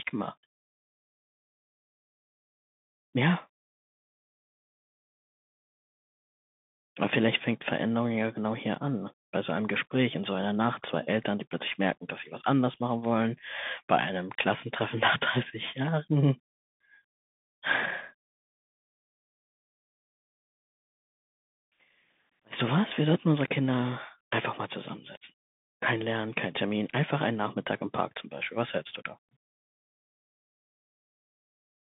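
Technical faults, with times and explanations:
Throughout, Bluetooth CVSD headset codec. The speech has passed through the narrowband CVSD codec at 64 kbps, which encodes each sample as a single up-or-down bit with an adaptive step size. The band runs from about 150 Hz to 3.6 kHz, so the speech sounds thin and boxed. The codec damage is plainly audible. Loud high sounds outrun the step and distort, s sounds turn scratchy, and a granular hiss sits under the speech.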